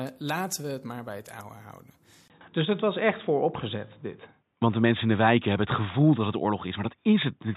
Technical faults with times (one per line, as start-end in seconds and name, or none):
2.28-7.56 input switched to a poorer device